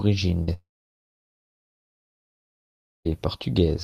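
At 0.43 to 0.49 s, 40 ms of speech packets missed the decoder, a short concealed packet loss; the receiver extended the preceding sound, producing a brief smear. From 0.53 to 3.07 s, a long network dropout likely cut off incoming audio: the stretched sound fades quickly, leaving about 2.4 s of silence before speech returns.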